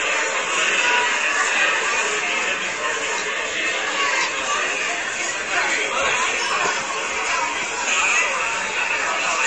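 A recording of sounds with nothing above 9 kHz throughout, plus audible coding artefacts. This is likely low-bitrate audio saved at a high bitrate: the band-limit fits a roughly 40 kbit/s MP3 later re-encoded at a much higher rate, which cannot restore what was removed.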